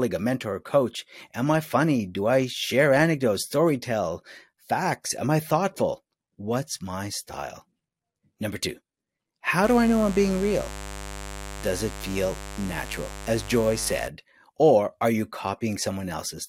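From 9.64 to 14.08 s, just before "or are you", a mains buzz sits somewhat below the speech: sharp spikes twice per 50 Hz cycle spray harmonics up to several kHz, so it rasps steadily, unlike a smooth, low, pure-toned hum.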